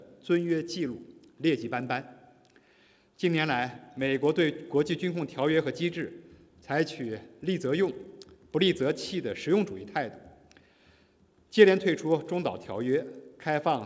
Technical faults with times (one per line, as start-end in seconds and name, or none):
0.00-13.86 resampler restarted on every block